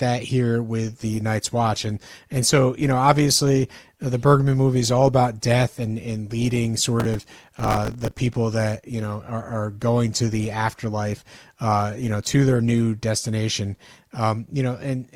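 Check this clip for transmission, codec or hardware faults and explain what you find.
Two faults stand out in this speech clip: a long stretch of reduced quality and a short burst of crackle inside it.

From 0.84 s to 12.84 s the speech shows more codec artefacts, then sharpens again without any gap. This is an adaptive stream at a lower bitrate: the player switched to a leaner encoding while the connection slowed, which fits a step from about 64 to 24 kbit/s Opus.

From 7.00 s to 8.18 s a gritty, tearing crackle rides over the speech. This is processor overload crackle: dozens of audio buffers, each around 5 ms, missed their deadlines, and each gap was filled with a stale fragment of old audio, leaving hard-edged splices.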